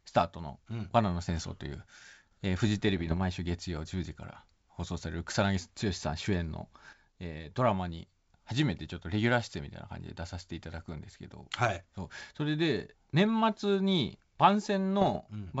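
Speech over a G.722 wideband link shows bit errors on the ADPCM link at 2.88–3.17 s and 15.02–15.19 s. The corrupted decoder state rings into rough pops, seen as broadband vertical streaks with jagged level jumps.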